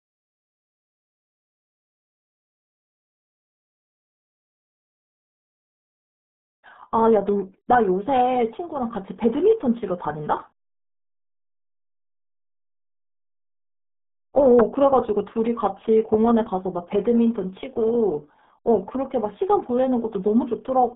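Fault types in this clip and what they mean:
RealAudio 14.4 codec: Heavy low-bitrate coding, at 8 kbit/s, leaves the speech muffled and gargly. Nothing passes above 3.8 kHz, and the band sits near 150 Hz to 3.6 kHz.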